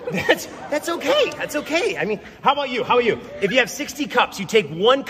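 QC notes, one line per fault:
Nothing to flag here, there's no technical fault anywhere in this one.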